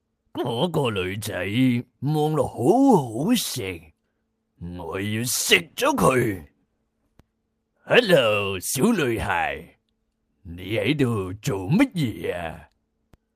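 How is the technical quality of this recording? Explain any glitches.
Nothing stood out as a glitch or technical problem on listening to this recording.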